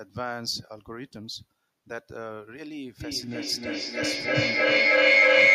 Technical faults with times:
3.00-5.54 feedback echo between two devices

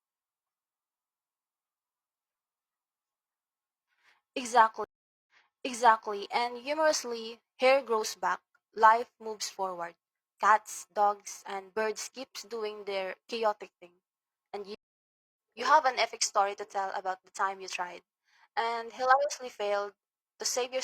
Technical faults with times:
4.84-6.13 stream reconnect
14.75-15.36 stream reconnect

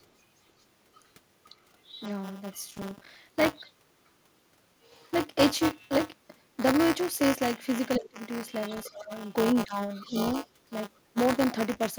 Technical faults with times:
0.00-11.98 buffer tearing
0.95-2.62 other side's voice leaking through
2.77-3.16 processor overload crackle
3.59-3.71 other side's voice leaking through
7.96-8.09 other side's voice leaking through
7.98-8.19 speech suppressed in double talk
8.84-8.90 other side's voice leaking through
8.89-10.15 speech suppressed in double talk
9.95-10.33 other side's voice leaking through

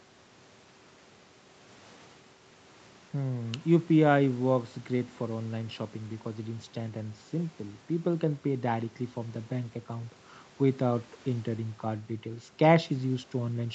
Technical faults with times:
none

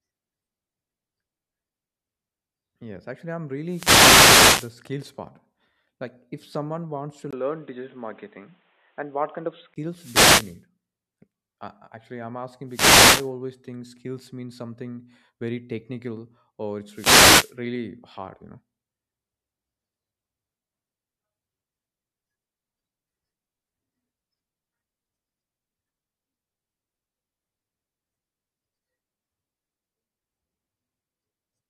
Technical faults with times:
3.65-4.79 wireless microphone noise hit
7.31-9.76 input switched to a poorer device
9.91-10.63 wireless microphone noise hit
12.68-13.31 wireless microphone noise hit
16.90-17.56 wireless microphone noise hit

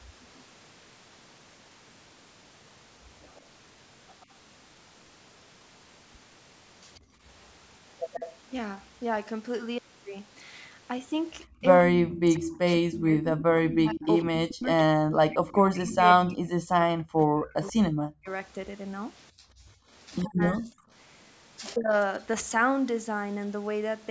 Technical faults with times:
0.38-4.26 echo leak
7.00-7.22 background gated by the echo canceller
8.12-8.36 echo leak
11.47-11.55 background gated by the echo canceller
11.61-21.93 speech suppressed in double talk
12.08-17.69 echo leak
19.32-19.88 background gated by the echo canceller

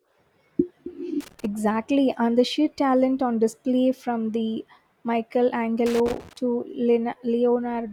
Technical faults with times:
1.20-1.45 loose connector crackle
5.86-6.37 loose connector crackle

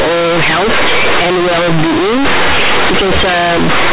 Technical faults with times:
0.00-3.93 companded audio read as linear

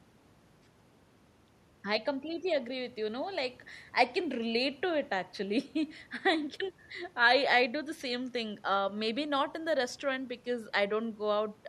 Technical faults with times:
none

